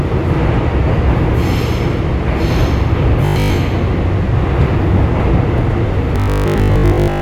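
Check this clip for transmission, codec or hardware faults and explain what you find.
Two faults show up, each twice: skipped compressed frames and a robotic buzz from repeated buffers.

Compressed frames are skipped at 2.18 to 2.20 s and at 5.83 s. The decoder drops whole 23.2 ms frames, about three and then about five. The sound jumps ahead.

A robotic sound from repeated short buffers runs from 3.26 to 3.58 s and from 6.16 s to the end. It is a rigid, metallic 50 Hz buzz. Audio likely arrives too seldom, so a 20 ms buffer repeats and replaces most of the real sound.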